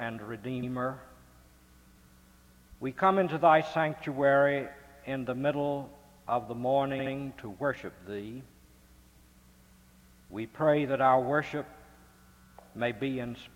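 A short run of compressed frames was delivered more than once, so the decoder replays the same slice of sound as repeated frames. At 0.62 s a 70 ms block plays twice, adding 70 ms. At 6.98 s the same-length block plays three times, adding 139 ms. Each is heard as a brief stutter.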